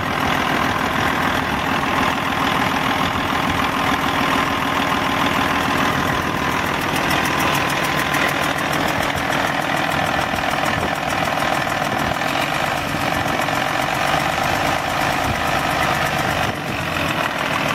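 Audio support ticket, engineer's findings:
Nothing stood out on listening, so there are no findings to log for this ticket.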